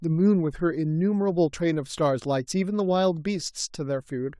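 No technical faults are audible anywhere in the speech recording.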